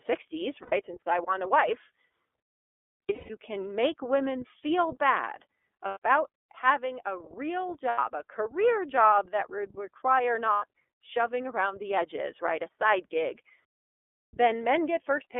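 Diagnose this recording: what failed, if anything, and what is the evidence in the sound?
The speech passes through the iLBC codec, a codec-stage fault present throughout. The band runs only from about 300 Hz to 3.5 kHz, so nothing above that survives. The voice is intelligible but plainly rough and synthetic. That texture fits iLBC at the 13.33 kbps mode with 30 ms frames. Each frame's excitation is coded on its own, without drawing on the frame before.

Lost iLBC frames point to the network stage. Dropouts sit at 0.63 to 0.73 s, 5.88 to 5.98 s, 7.88 to 7.98 s and 10.53 to 10.63 s. Each lasts about 90 ms, which fits three lost 30 ms frames. A longer cluster runs from 3.06 s. There, losses are scattered over about half a second, with the longest gap around a fifth of a second. In each gap the decoder repeats the last pitch cycle mixed with noise. It sounds like a held, breathy vowel. The voice recovers almost at once.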